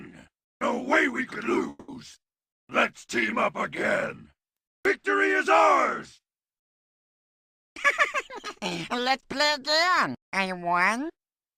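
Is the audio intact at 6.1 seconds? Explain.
Yes, the audio is intact at 6.1 seconds, with no dropout, click, distortion or other fault at that moment.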